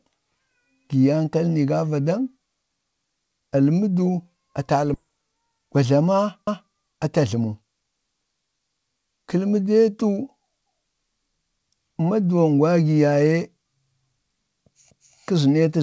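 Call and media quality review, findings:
Skip ahead, 4.94–4.96 s: abrupt forward jump with no gap fill. Roughly 0.7 s of speech missing, with both sides spliced nearly directly. Probable component is the jitter buffer discarding queued audio on overflow, or loss in transit with later packets already waiting.

Overlapping chunks, 6.47–6.73 s: stutter where a 250 ms piece plays twice at a chunk join. Probable component is upstream chunked processing, with the size pointing to 4 s chunks. Each chunk starts before the previous one ends, so the overlap is replayed.

Jitter buffer speed-up, 6.94–7.63 s: speech runs at 109% with pitch unchanged and sounds hurried. The jitter buffer was over target depth and trimmed roughly 70 ms as repeated pitch-period cuts to reduce delay. The G.722 call path's band limit at 8 kHz applies throughout.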